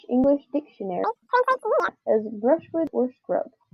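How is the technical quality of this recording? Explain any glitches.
There's one clear glitch in this speech clip. From 1.04 to 1.89 s the audio is read two samples at a time, so it plays at double speed. Pairs of samples get treated as single frames, which doubles the rate and pushes everything up an octave. The voice comes out fast and chipmunk-like.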